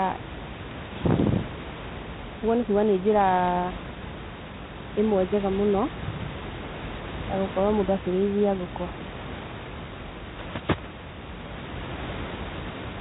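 Throughout, the speech carries a harsh, rasping hiss that rises and falls with its level, and nothing passes above 3.8 kHz: G.726 ADPCM coding at a rate that fits 24 kbit/s, too few bits per sample. Room noise sits about 12 dB below the speech.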